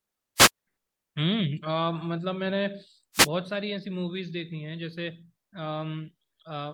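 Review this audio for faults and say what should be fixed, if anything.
Two wireless microphone noise hits occur, at 0.36 to 0.50 s and 3.13 to 3.29 s. Each is a brief swish of static over the speech. Reflections cancelled the radio signal, so receiver noise rose. Use diversity receivers and keep antennas in clear view.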